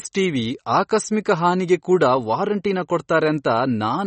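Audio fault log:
Throughout, MP3 compression: there's nothing above about 8.3 kHz, so the speech sounds dull, and there's a watery, swirly texture running under it, with s sounds going metallic and chirpy. That's likely a starved MP3 encode, which fits something around 32 kbps. With so few bits it lops off the treble and lets weak frequency lines flicker on and off between frames, and that flicker is the swirl you're hearing.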